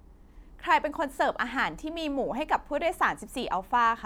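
Speech recording with no technical faults. Nothing in it calls for a time or a cause.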